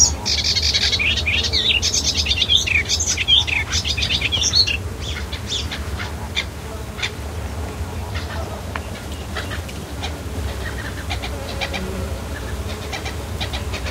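At 10.35 s a doubled audio track kicks in and runs to the end: a second, full-band copy trailing by roughly 150 ms, maybe 5 dB down, with no decay or room colour. It starts abruptly, likely from a slower duplicate capture path.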